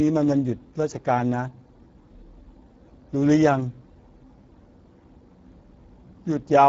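From start to end, the speech passes through the Speex codec at a low setting, the damage plainly audible and fitting a bitrate around 10 kbps. Too few bits for the excitation leave voices noisy and hoarse, with nothing above 7.7 kHz.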